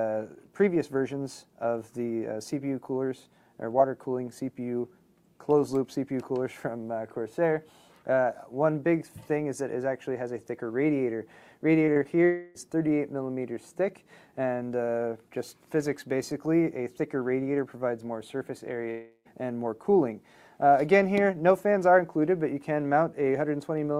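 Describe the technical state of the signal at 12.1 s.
Right around 12.03 to 12.07 s there's a short concealed packet loss: about 20 ms of audio never arrived in time, and the decoder patched roughly 15 ms by extending the preceding sound before fading back into real audio. You hear it as a quick smear or wobble.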